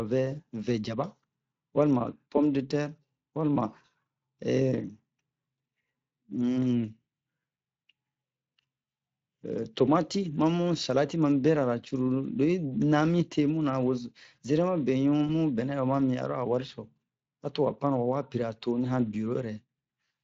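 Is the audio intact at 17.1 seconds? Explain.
No. The Speex codec damage runs through the whole clip, including 17.1 seconds. This CELP codec has too few bits to rebuild the speech excitation faithfully. The speech sounds plainly noisy and hoarse, which fits a bitrate of around 20 kbps.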